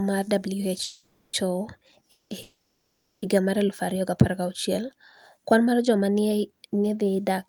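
Call audio freezes interrupt the speech at 0.83–1.35 s, 2.11–2.32 s and 2.42–3.24 s, likely from delayed packets draining the jitter buffer. Each time the last sound is stretched into a fading buzz or hiss, then silence. Speech resumes where it stopped, with nothing lost.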